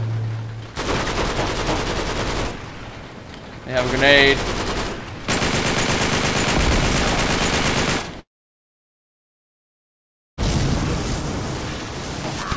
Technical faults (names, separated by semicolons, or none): long network dropout